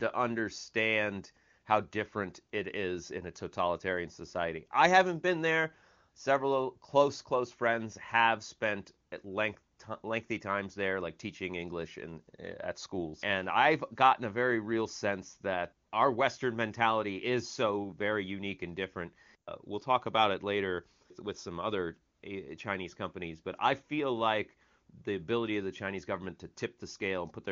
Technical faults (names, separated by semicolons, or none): none